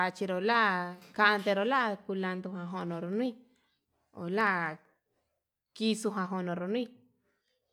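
From about 2.75 s to 5.36 s the speech picks up a run of periodic USB or driver dropouts: around forty tiny ticks, spaced every 64 ms or so, roughly sixteen a second. Something is stalling the bus or driver on a fixed schedule, and each time a sliver of audio, well under a millisecond, just gets skipped rather than padded with silence. That splice is what you hear as a steady clicking riding on the voice.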